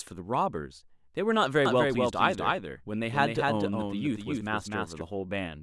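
Speech, with a doubled audio track from 1.65 s to 5.01 s: a second full-band copy trails by around 300 ms, roughly 5 dB quieter, starting and stopping abruptly. On a spectrogram every syllable reappears as a fainter, undecayed ghost. This is likely a second, slower capture path.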